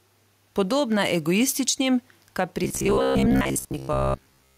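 Throughout the speech, the level breathes, with the quiet room noise sitting about 45 dB below the voice and the level swinging by around 5 dB. This gain pumping likely comes from input gain set far too high, with a fast limiter clamping down on every peak.

From 2.64 s to the end, the voice turns into a rigid, metallic buzz near 66.8 Hz that only loosely tracks the speech. This is robotic sound from repeated short buffers. The likely cause is delayed audio, with each roughly 15 ms chunk replayed to fill the gap while most of the real signal is skipped.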